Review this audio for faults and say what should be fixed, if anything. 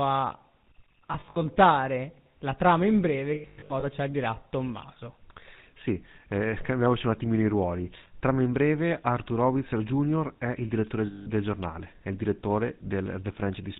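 The whole clip carries GSM full-rate codec damage, plainly audible. The speech is band-limited to 4 kHz, and the pulse-driven vocal-tract model, consistent with a 13 kbps full-rate stream, gives a buzzy, gravelly roughness. Prevent it by carrying the call on a wideband codec instead of GSM full rate.

Lost GSM frames cause three dropouts: 1.12–1.37 s (about 140 ms lost, scattered), 3.34–3.84 s (about 300 ms, scattered, runs near a tenth of a second) and 11.06–11.27 s (about 200 ms). The decoder repeats the last good frame at falling level, so each gap becomes a rough, metallic ring. Prevent it by improving the radio link or adding error protection.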